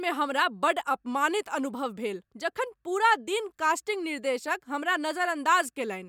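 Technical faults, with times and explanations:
No technical faults can be heard in this clip.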